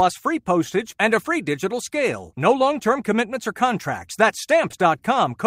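At 4.71 to 4.74 s the speech shows a short concealed packet loss: about 20 ms of the stream failed to arrive at the decoder in time, and the receiver synthesised roughly 15 ms of replacement by extending the preceding signal, pitch-based if voiced, shaped noise if not, before cross-fading back into the real audio. The result is a brief smear or wobble in the speech, where any short consonant in that gap could disappear.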